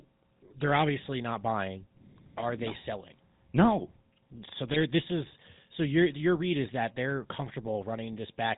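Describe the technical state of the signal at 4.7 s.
Right there, from 4.69 to 4.77 s, you've got GSM bit errors: corrupted filter, pitch and gain values garble a handful of frames, roughly four, so the speech squawks and gargles briefly. Underneath it all sits the GSM full-rate codec, whose sparse pulse excitation and 4 kHz ceiling give the whole speech clip that buzzy, gravelly edge, consistent with the 13 kbps coder.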